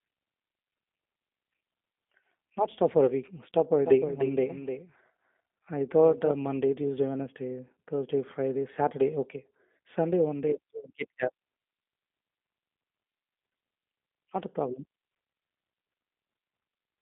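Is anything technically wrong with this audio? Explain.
Yes, there are two faults.

Throughout the speech, there is G.729 codec damage. The codec rebuilds each 10 ms frame from a vocal tract filter, a pitch predictor and a few coded pulses. This discards fine detail. Nothing above 3.6 kHz remains, and the line band runs from about 200 Hz to 3.5 kHz. The sound is thin and plainly rough and synthetic, which fits an 8 kbit/s G.729 stream.

From 3.85 s to 6.31 s, there is a doubled audio track. A second full-band copy trails the original by roughly 300 ms, about 10 dB quieter. It has no decay or room colour. It starts and stops abruptly at those times. The likely cause is a second capture by a slower path mixed back in. It sounds like a distinct, dry echo.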